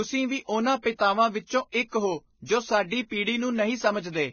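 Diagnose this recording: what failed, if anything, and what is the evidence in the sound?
The speech has a hard ceiling at 6.5 kHz throughout, with grainy hiss replacing fine treble detail, roughened vowels and softened consonant attacks. The failure is at the codec stage, likely Vorbis compression at a very low rate, around 17 kbps. The encoder drops the upper band and quantises the remaining residue so coarsely that detail turns into noise-like texture. A spectrogram shows a flat cut-off at 6.5 kHz and speckled, smeared harmonics below it.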